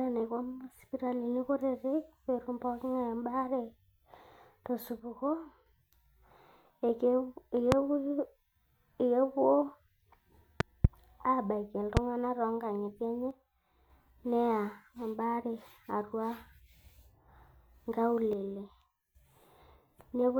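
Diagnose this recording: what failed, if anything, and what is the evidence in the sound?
One channel drops out at 5.00–5.66, 13.31–13.90 and 18.33–19.15 s. The speech falls about 6 dB in the mono sum. A likely intermittent analogue cable or connector.

Loud pops sit at 7.72–7.75, 10.60–10.87 (a double) and 11.97–11.99 s, far above the speech. The likely cause is voltage spikes in the analogue wiring.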